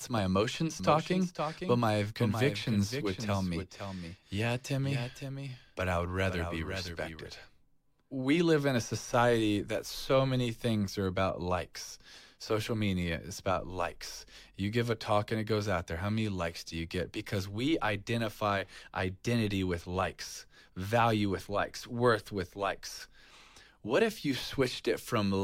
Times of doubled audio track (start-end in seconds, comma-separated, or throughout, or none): 0.80-7.28